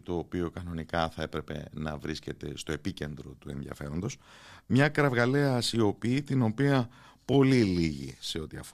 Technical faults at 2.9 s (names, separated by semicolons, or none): none